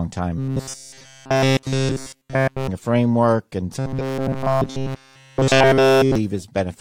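From 0.38 to 2.69 s, before "a framework and", and 3.79 to 6.15 s, after it, robotic sound from repeated short buffers: a rigid 133 Hz buzz, likely a looping 7.5 ms chunk. Spectrograms show even 133 Hz harmonic stripes; waveforms repeat one 7.5 ms shape.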